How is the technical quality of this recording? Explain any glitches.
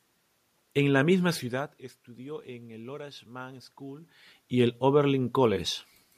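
Nothing here counts as a glitch: the room noise belongs to the space the microphone was in, and the shifts in level around 1.5 seconds and again near 4 seconds are just the talker moving relative to the microphone, not the system acting up.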